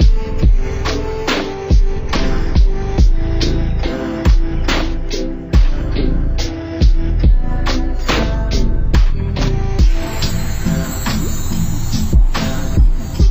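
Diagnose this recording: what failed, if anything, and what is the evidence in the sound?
Everything plays at half speed and an octave low from start to finish: stereo read as mono, interleaved left and right samples played as one channel.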